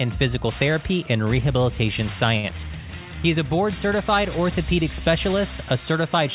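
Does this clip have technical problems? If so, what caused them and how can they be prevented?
Yes. A short stall from a late packet occurs at 2.38 to 2.46 s: a packet arrived late, the jitter buffer ran dry, and the receiver stretched the last sound by about 57 ms before resuming from the same point. Nothing is skipped, which distinguishes it from a lost packet, but everything after it is delayed by 57 ms. The audio has no content above 4 kHz, which fits a 64 kbps G.711 mu-law call path. A larger or adaptive jitter buffer and a steadier network would prevent this.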